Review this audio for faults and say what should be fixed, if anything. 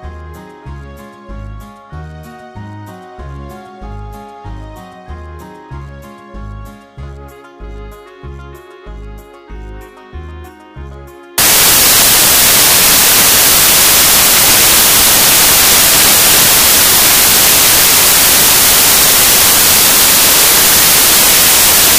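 From 11.38 s to the end, the audio turns into loud, harsh broadband noise. This is samples built from the wrong bytes. The reader joins each sample's bytes incorrectly, whether from a one-byte offset, swapped byte order or a wrong alignment. The rapidly changing low bits then land in the high part of every value. To prevent it, confirm the byte order, sample width and data offset before decoding, and test that a known reference file reads back correctly.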